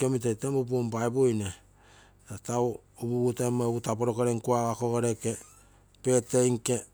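A speech recording with no audible technical faults anywhere in the signal.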